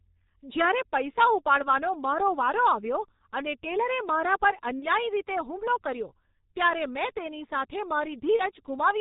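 The whole speech clip carries G.723.1 codec damage, and it is heavy. Nothing above 4 kHz survives, so the voice sounds muffled. The slowly updated voice model leaves it hoarse, with smeared consonants. This fits the 6.3 kbit/s mode.

At 4.80 s, after "મારા પર" and before "રીતે હુમલો કર્યો ત્યારે", VoIP packet loss is concealed by the speech codec. About 30 ms is missing, which fits one lost frame. The decoder stretches the last sound into a buzzy tone or a coloured noise that fades. The disturbance lasts until 4.86 s. At 8.36 s, after "ત્યારે મેં તેની સાથે", the same happens and lasts until 8.42 s.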